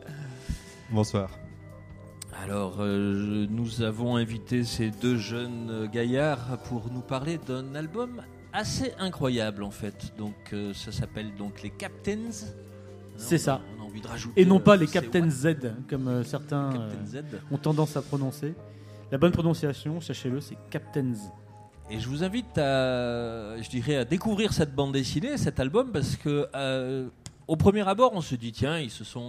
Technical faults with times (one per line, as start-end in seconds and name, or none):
none